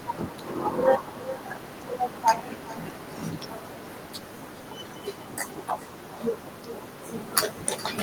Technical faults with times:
0.00-8.02 echo with no canceller

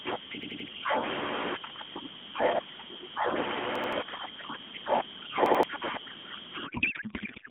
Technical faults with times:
0.43-0.68 repeated buffer
3.75-3.93 repeated buffer
5.46-5.63 repeated buffer
6.66-7.50 codec payload misread

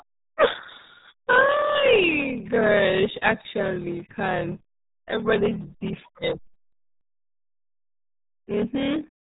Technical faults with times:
0.00-9.32 block size mismatch (padded)
0.00-9.32 RealAudio 14.4 codec

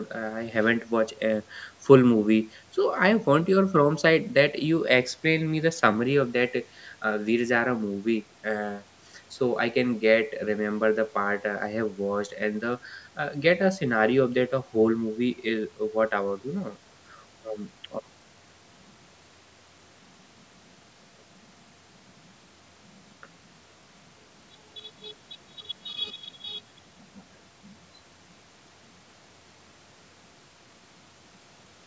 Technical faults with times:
none

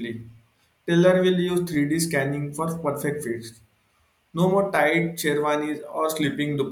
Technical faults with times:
1.74 overlapping chunks
4.76 overlapping chunks

